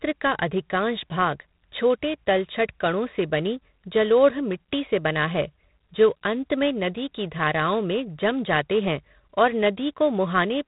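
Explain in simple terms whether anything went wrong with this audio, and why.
A harsh, rasping hiss rides on the speech for the whole clip, growing louder when the speech does, and everything sounds thin and muffled like a phone call. That comes from G.726 ADPCM, a telephone coding that stores only a rough difference from a guess of each sample, run here at a low setting, and it removes everything above about 3.8 kHz.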